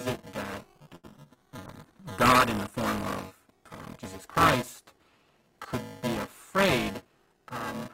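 Buffer tearing runs through the whole recording: a steady rattling buzz near 375 Hz, which fits a 128-sample buffer, rides on the speech wherever there is signal. Within each period roughly a third of the audio is a few milliseconds stale, joined with hard edges. On a spectrogram this appears as a comb of harmonics spaced 375 Hz apart; the waveform shows small regular steps.

From 0.95 to 1.27 s, just after "it that", repeated packet loss leaves four holes. Each is filled by stretching the preceding sound, and the longest gap is 81 ms. The result is choppy and robotic. The spectrogram shows smeared, frozen bands and brief blank slots; in the waveform, repeated cycles alternate with flattened stretches.

From 1.67 to 4.68 s a call bitrate drop makes the speech rough and watery, which fits the encoder falling from about 32 to 15 kbps. It stays at its lowest for about 2.2 s. On a spectrogram the fine harmonic detail turns blotchy and smeared, with fewer distinct lines than the surrounding speech.

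Between 7.05 and 7.55 s a jitter buffer speed-up trims the backlog. Short pitch-period pieces, roughly 70 ms in total, are cut out, so the audio runs at 111% speed with unchanged pitch and sounds hurried. The spectrogram shows compressed timing but the same harmonic spacing.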